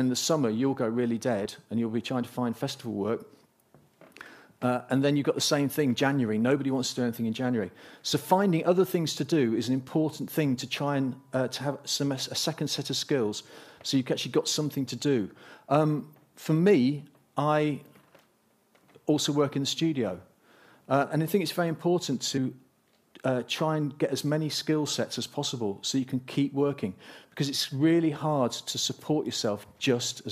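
The audio has compressed frames skipped: whole 23.2 ms frames are not played, so the audio jumps forward at 1.44–1.46 s (roughly 20 ms lost) and 22.36–22.38 s (about 70 ms lost).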